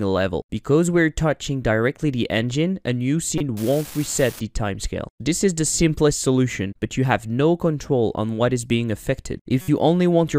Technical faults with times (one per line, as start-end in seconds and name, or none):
3.38-3.40 corrupt frame decoded
3.57-4.40 unreliable data bit
9.61-9.68 corrupt frame decoded